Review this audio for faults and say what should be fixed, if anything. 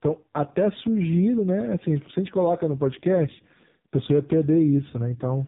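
Throughout, the speech went through an AMR narrowband mobile codec at a low mode, so nothing above 3.8 kHz remains and the voice sounds heavily buzzy and synthetic. To prevent it, carry the call on a wideband codec or a higher AMR bitrate mode.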